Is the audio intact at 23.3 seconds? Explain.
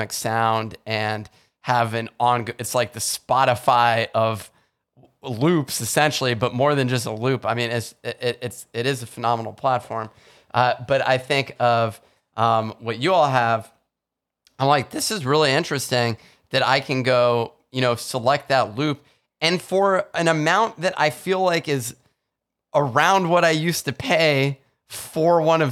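No, not quite. From about 22.97 to 23.46 s, just before "I used to pay", there's hard clipping. The speech is driven about 2 dB past what the stage can pass, so peaks get sliced flat. That adds high harmonics and puts a brief crackly edge on the loudest bits.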